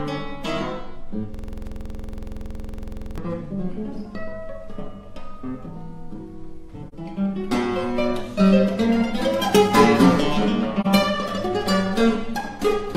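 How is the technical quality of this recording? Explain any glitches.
The recording has two kinds of glitch: one long buffer-loop freeze and two brief dropouts.

From 1.34 to 3.18 s, a system hang loop repeats a 46.44 ms fragment, which fits a 2048-sample ring buffer cycling while the system stalled. It produces a rough 21.5 Hz buzzing stutter.

At 6.88–6.94 s and 10.80–10.87 s, AAC frame loss with muting leaves soft-edged gaps of 42.7 ms, consistent with single lost frames zeroed by the decoder. The overlapping windows fade the sound out and back in.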